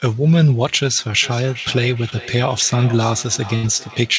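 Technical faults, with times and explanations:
1.22 s to the end, feedback echo between two devices: a second device's playback loops into the microphone uncancelled, so sound returns roughly every 0.4 s, thinner and ringing, about 17 dB below the speech.
2.10 to 2.13 s, short concealed packet loss: 20 ms of audio never arrived, and the decoder extended the preceding sound for 15 ms, leaving a brief smear or wobble.
3.55 to 3.65 s, burst of packet loss: about 80 ms went missing in a row; 77 ms of fading continuation fills it, heard as a held buzz or hiss before the audio resumes further on.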